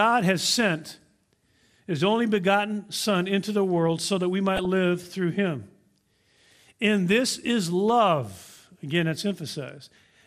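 From start to finish the speech carries plain MP2 compression damage: the top end sounds dulled, with a gurgly, grainy edge that comes and goes. That's the likely result of an MPEG Layer II encode at a low rate, around 80 kbps. There aren't enough bits to go round, so upper sub-bands drop out and come back, and what's left is quantised coarsely.

From 4.56 to 4.65 s there's a burst of DAB burbling, a short patch lasting about a tenth of a second. That fits reception errors slipping past error correction and corrupting a handful of MP2 frames, roughly four of them. Bad samples put short blips of noise into individual sub-bands, with a bit error rate somewhere around 0.15 percent.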